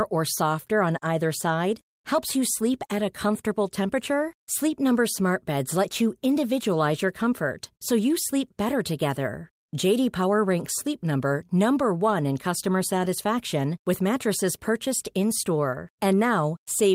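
No technical faults can be heard anywhere in this speech recording. Nothing interrupts or alters the sound at any point in the clip.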